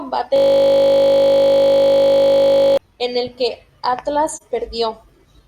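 From 0.36 to 2.77 s, a system hang loop freezes the speech. One 20 ms slice of the buffer repeats over a hundred times, giving a steady 50 Hz buzz.

At 4.34 to 4.42 s, AAC frame loss with muting leaves a soft 43 ms gap. This fits one lost frame, faded out and in.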